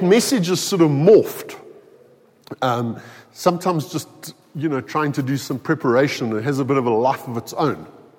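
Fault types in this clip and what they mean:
No fault types are present in this clip.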